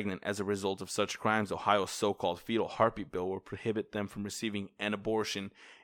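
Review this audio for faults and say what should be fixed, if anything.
No faults can be heard anywhere in this speech recording. Nothing needs to be fixed.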